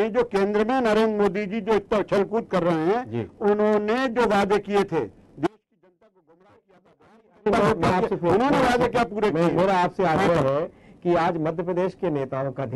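An audio dropout to a faint residue runs from 5.47 to 7.46 s: the sound cuts abruptly, leaving a faint leak roughly 35 dB down, likely from a live path that lost its feed. Unlike a pause or fade, the drop and return are instant.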